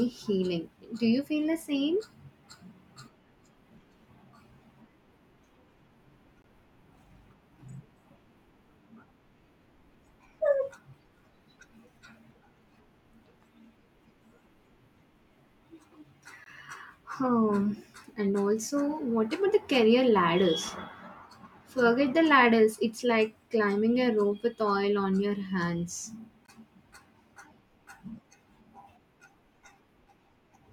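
Listen around 6.42 to 6.44 s, 16.44 to 16.46 s and 26.46 to 26.48 s and you'll catch a gap between chunks each time: a 20 ms hole of dead silence with hard edges cutting into the speech. The audio was handled in 10-second pieces and silence got slotted in at each join, so nothing's missing, it just gets pushed later. That's why the gaps land 10.02 s apart rather than a clean 10.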